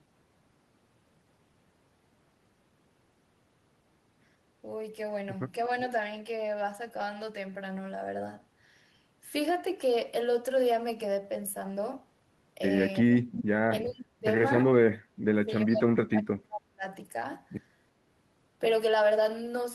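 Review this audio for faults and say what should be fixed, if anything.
Echo leak at 5.77–5.87 s and 13.38–13.42 s: a faint copy of the speech returns 354 ms late, about 25 dB then 15 dB down, likely residual loudspeaker pickup the echo canceller missed. Fix by improving the far end's echo cancellation.

Speech suppressed in double talk at 13.01–14.26 s and 14.93–16.84 s: the speech drops by up to about 40 dB in pieces, likely from the canceller attenuating overlapping talk. Fix by tuning double-talk detection to keep near-end speech.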